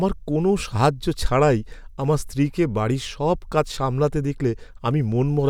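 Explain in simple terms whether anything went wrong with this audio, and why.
Nothing went wrong with this speech recording, and no technical fault can be heard anywhere in it. Listening all the way through, there is no moment where the sound misbehaves, so there is nothing that needs explaining or fixing.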